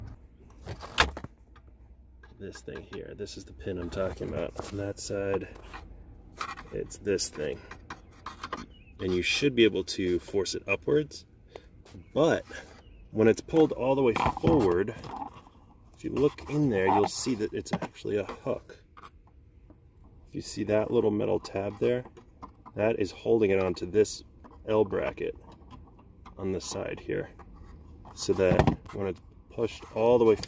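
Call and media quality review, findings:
No faults found across the clip; nothing in the audio points to a transport, device or processing problem.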